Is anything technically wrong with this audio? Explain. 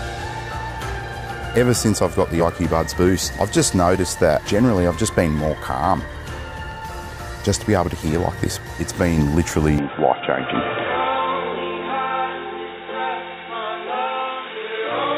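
Yes. From 9.78 s to the end at 15.18 s, the sound turns dull and boxy with nothing above 3.8 kHz, likely an input switched to a poorer device. Unlike a plain filter, it brings a faint new background noise, though there is no gap and the level hardly changes.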